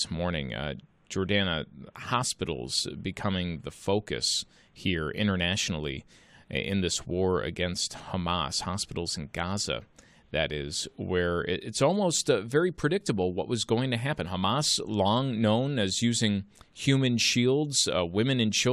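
Speech recording; no audible technical fault anywhere in the clip.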